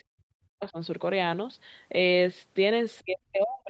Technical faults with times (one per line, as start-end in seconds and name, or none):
0.04-0.78 speech suppressed in double talk
2.99-3.69 speech suppressed in double talk